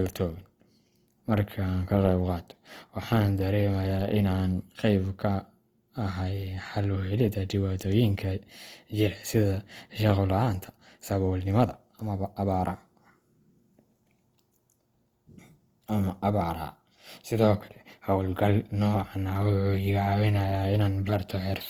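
Opus compression runs through the whole speech clip, with plainly audible damage: a rough, grainy, noisy texture. It likely comes from Opus in CELT mode at a rate fitting 24 kbps, which fills starved bands with folded or noise content. The bandwidth stays full, reaching 20.3 kHz.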